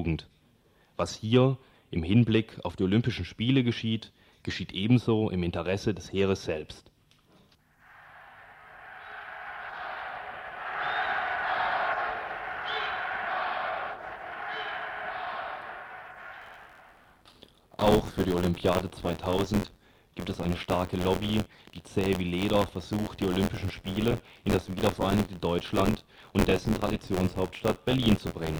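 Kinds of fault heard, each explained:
Buffer tearing: From about 16.41 s right through to the end, there's a steady robotic rattle at 86.1 Hz, which fits a 512-sample buffer. The app filling the ring buffer and the hardware draining it have drifted out of step and now cross mid-period, so a small slice of each buffer, roughly a seventh, replays audio from a lap earlier, about 20 ms stale. The hard joins on either side of that slice produce the buzz.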